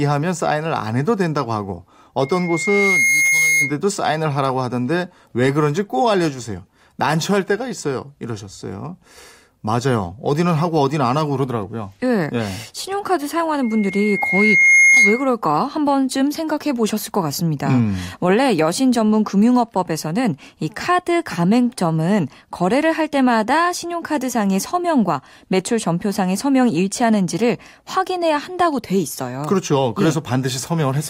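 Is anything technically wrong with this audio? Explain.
Yes, there's loudspeaker feedback squeal at 2.21–3.77 s and 13.62–15.31 s: mic catching its own speaker, a 2.1 kHz tone swelling over about a second, riding above the speech.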